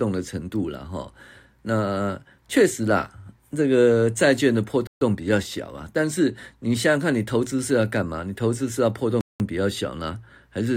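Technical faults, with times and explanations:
4.87 to 5.01 s and 9.21 to 9.40 s, Bluetooth stall: the speech drops abruptly into dead silence, about 141 ms the first time and 191 ms the second, then carries on as if a switch had been flicked back. The likely cause is radio interference holding up packets on the wireless link, so the headphones' small playback buffer emptied and output simply paused until the delayed, resent data arrived and refilled it.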